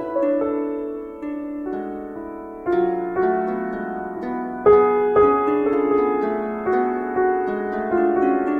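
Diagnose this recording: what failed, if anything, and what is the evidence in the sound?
Nothing in this music recording points to a failure at any stage of the chain. There is no event in the sound that calls for a diagnosis.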